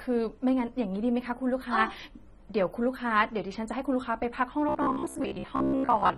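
From the start, the speech sounds dull and smeared, with a fizzy, warbling edge on sibilants and held sounds, and the damage is plainly audible. This is likely AAC compression, AAC-LC at a low bitrate, which fits about 24 kbps. At that rate the encoder spends too few bits on each frame of frequency lines, so it lowers the top cut-off and leaves gaps or noise-filled patches in the spectrum.

From 4.69 s to the end at 6.17 s, the speech turns into a rigid, metallic buzz pitched at 66.7 Hz that only loosely follows the speech underneath. This is robotic sound from repeated short buffers, likely caused by new audio arriving too seldom, so the same 15 ms snippet is replayed to fill the wait, making up roughly 70 percent of the sound, while the real audio is skipped. That fixed repeat rate is what sets the buzz's pitch.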